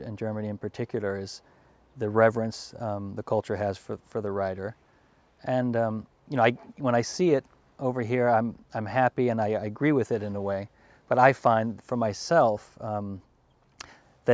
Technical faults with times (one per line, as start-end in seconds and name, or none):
none